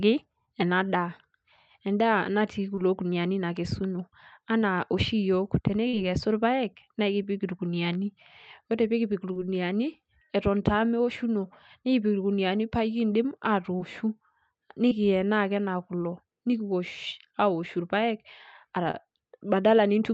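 Short concealed packet loss occurs seven times: at 0.45, 2.75, 5.89, 9.33, 13.77, 14.89 and 18.91 s. Each time, about 20 ms of the call arrived too late to decode. At 5.89 s the gap is about 40 ms. The receiver covered each hole by extending the preceding sound and then blending back into the real audio. The result is a brief smear or wobble. Over the speech, which is band-limited to about 8 kHz, the gap at 5.89 s is the longest.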